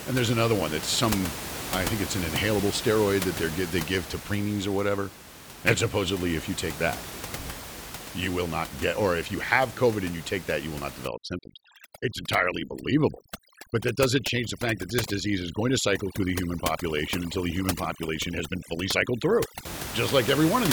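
From 11.08 to 19.65 s the room noise, about 10 dB below the voice, collapses into near silence dotted with twinkling specks. This is overdone noise removal: a reduction setting strong enough to gate individual frequency bands near its noise estimate, taking quiet parts of the voice along with the background.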